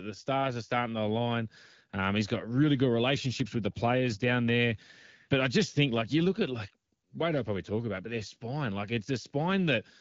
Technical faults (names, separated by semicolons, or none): AMR bit errors